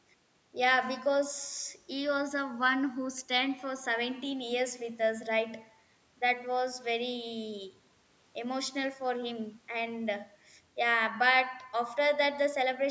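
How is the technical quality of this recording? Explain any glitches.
No glitches turn up anywhere in this speech recording; it just carries the usual sound of a call microphone's processing, with the top end stopping around 8 kHz and the deepest bass trimmed away as normal.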